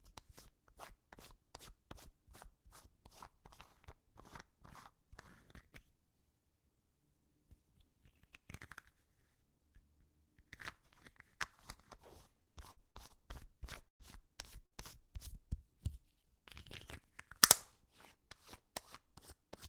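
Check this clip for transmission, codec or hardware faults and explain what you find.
Transmission faults appear in the second half of the clip, all caused by lost packets.

From 12.43 to 13.17 s there is repeated packet loss, which gives a robotic sound. Packets dropped out four times in under a second. Each hole was patched by repeating the last sound, the longest for 60 ms. About a quarter of the stretch is patched sound. The result is choppy, with pieces of the sound missing.

Two single bursts of packet loss follow, at 13.88 to 14.03 s and at 14.66 to 14.74 s. In each, a run of packets never arrived in time. The receiver carried on the last sound and faded it, for 118 ms and then 51 ms. The first fade ends in near silence. The sound then jumps ahead, with 120 ms and 60 ms of material lost.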